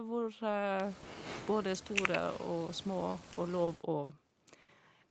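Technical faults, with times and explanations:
3.11–4.12 s, repeated stalls (stutter): packets arrived late five times, so the jitter buffer kept running dry. About 140 ms of held sound was inserted, the longest gap 60 ms, and nothing was lost. The audio drags in small hitches. A spectrogram shows short, smeared horizontal stretches where frames were extended, and the waveform shows repeated, slightly faded segments.
4.61 s, short stall from a late packet: one packet came about 70 ms late, and the receiver stretched the previous sound for 70 ms before resuming at the same point. It sounds like a brief held sound with a slight buzz or dip. A spectrogram shows one flat, blurred patch below the 8 kHz band edge, and the waveform shows a small, even-envelope plateau.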